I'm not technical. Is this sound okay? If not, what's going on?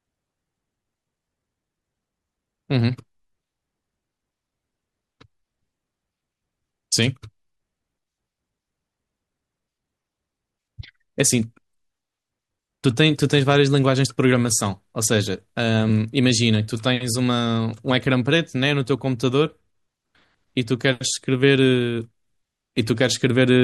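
No. At 15.89 s there's a split-second blip, a tiny glitch in the speech. That's damaged data in a compressed stream: part of the stored file got corrupted, so the player briefly couldn't decode it and had to find its place again.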